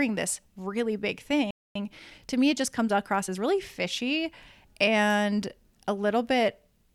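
A playback stall at 1.51 s cuts the speech off mid-flow into silence for about 0.25 s, until 1.75 s. The likely cause is the player running short of buffered data or its output thread being blocked, so nothing reached the output until it recovered.

Time-compressed catch-up follows from 1.75 s to 3.39 s, as the player works off the backlog by trimming small slices and cross-fading across the joins. The speech runs about 1.15 times faster at unchanged pitch, sounding hurried.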